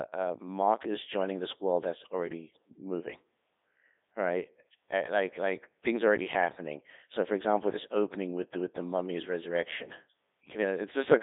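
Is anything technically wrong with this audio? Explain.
Yes. The whole clip passes through a Codec 2 vocoder, consistent with its 3.2 kbit/s mode. Only pitch, voicing, energy and a spectral envelope survive, resynthesised from sine waves, so speech turns buzzy and robotic, confined to about 200 Hz to 3.7 kHz with nothing above 3.8 kHz.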